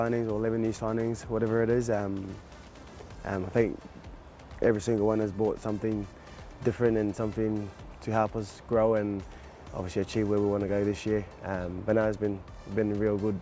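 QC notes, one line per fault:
Nothing stood out on listening, and the audio sounds like it came through a wideband call codec, with nothing heard above 8 kHz.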